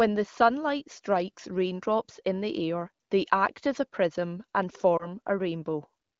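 A lost AMR speech frame occurs at 4.97 to 5.07 s, just after "as a prism and". Radio errors made the frame fail its checksum, so the AMR-WB decoder reused the previous pitch and vocal-tract settings at reduced gain. The result is a brief dip or warble, consistent with a single dropped 20 ms frame, before the light wideband coding resumes.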